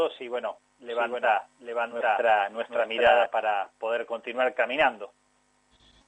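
From 0.9 to 3.26 s a doubled audio track appears: a second, equally loud copy trails by about 0.7 s, likely from an edit holding two offset copies, and stops abruptly without any echo-like decay.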